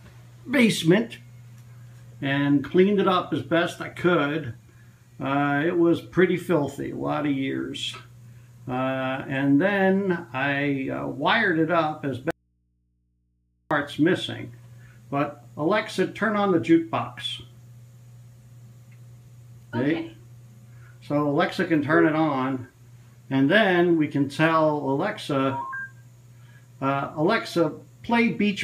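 At 12.31 s the sound cuts out abruptly and returns at 13.71 s, an audio dropout to a faint residue lasting 1.4 s. The gap is not silent: mains hum sits there, roughly 45 dB below the signal, which likely means the source was lost while the input after the break stayed open. The hard edges set it apart from a pause or fade, and the hum separates it from a clean digital dropout to true silence.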